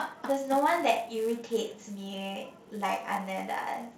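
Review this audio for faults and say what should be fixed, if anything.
Throughout the speech a 250 Hz buzz tracks the signal's level: a filter restarted on every block, starting each from silence with a small transient, which fits a 128-sample block. Spectrograms show lines at 250 Hz and harmonics, and waveforms show ticks every 4 ms. Carry the filter state across block boundaries to prevent it.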